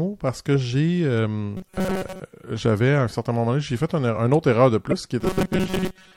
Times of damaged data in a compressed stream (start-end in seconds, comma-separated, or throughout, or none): 4.91-4.93